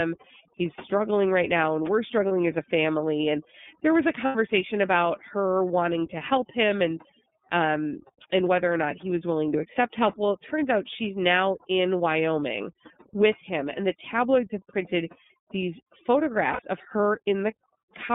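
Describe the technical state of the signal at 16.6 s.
At 16.6 s you're right at the tail of some lost iLBC frames, from 16.52 to 16.61 s. The decoder holds the last pitch cycle with added noise, so that 60 ms gap comes out as a brief buzzy, held vowel, which fits two dropped 30 ms frames. The iLBC codec itself is at work there too, limiting the band to roughly 200 Hz to 3.6 kHz and giving the speech a plainly rough, synthetic edge. On top of that, overdone noise removal is cutting bands near the noise floor, so the background drops and breaks up into twinkly specks.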